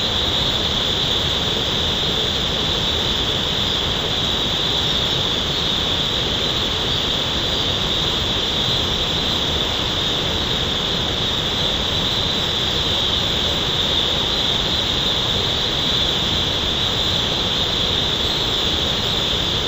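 Stereo read as mono runs from the first moment to the last. The player has taken interleaved left and right samples and treated them as one channel, stepping through them in turn, so every stereo pair becomes two consecutive mono samples. The result plays at 0.5 times normal speed and sits 12 semitones, a full octave, below where it belongs. A fainter mirrored copy of the sound also shows up in the upper half of the spectrum.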